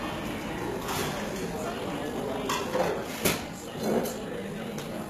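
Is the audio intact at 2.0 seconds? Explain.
No. At 2.0 seconds the audio sits inside a time-stretched section running from 1.52 s to the end. It was likely squeezed to about 1.69 times its speed by dropping short pieces while holding pitch, so the pace jumps abruptly and sounds rushed at unchanged pitch.

HE-AAC compression likely affects the whole clip. The codec keeps only the lower spectrum and rebuilds the treble by copying bands upward, which fits a low bitrate around 20 kbps. The damage is plainly audible here: treble sounds gritty and metallic.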